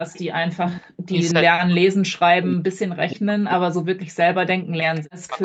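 From 0.11 to 0.21 s, an echo leak is audible: a faint copy of the speech, about 25 dB down, arrives 319 ms late. A loudspeaker echo likely slipped past the canceller.

From 0.53 to 5.39 s, speech is suppressed in double talk. For roughly four seconds the voice dips and drops out, at worst by about 40 dB, likely because the canceller mistook overlapping talk for echo.

Brief echo scraps return at 5.01 and 5.38 s, each about 30 dB down and delayed 319 ms.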